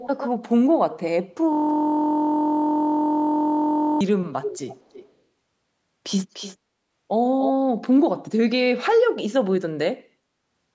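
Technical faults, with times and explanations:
0.0–0.28 s, 4.42–5.12 s, 6.33–6.57 s, 7.41–7.5 s, echo leak: a fainter delayed copy of the speech trails it by about 0.3 to 0.34 s. It sits roughly 5 to 15 dB down, likely from a far-end loudspeaker the echo canceller did not fully remove.
1.53–4.01 s, system hang loop: one 23.22 ms slice repeats about a hundred times. It makes a steady buzz at 43.1 Hz, which fits a frozen 1024-sample buffer.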